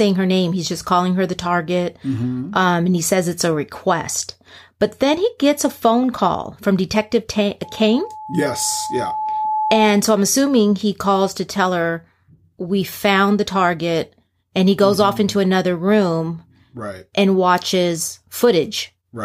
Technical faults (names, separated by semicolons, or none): loudspeaker feedback squeal